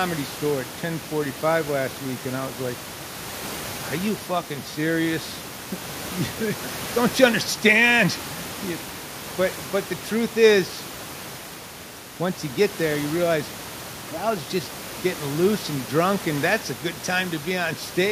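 A speech recording with no technical faults.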